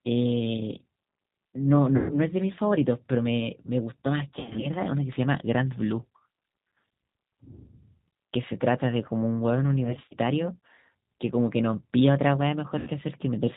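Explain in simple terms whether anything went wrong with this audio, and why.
Two things went wrong. Throughout, the speech passes through the G.729 codec, a low-rate phone codec that rebuilds the voice from a simple model of the throat and pitch. It sounds plainly rough and synthetic and lacks anything above 4 kHz. Unlike plain muffling, the damage is a grainy, artificial texture.

Packets were also dropped, and the speech codec concealed the loss at 1.96–2.15 s, 4.29–4.69 s, 9.85–10.15 s and 12.79–12.90 s. The decoder stretches the last sound into a fading buzzy tone or noise instead of leaving silence, and the voice stays weak briefly afterwards.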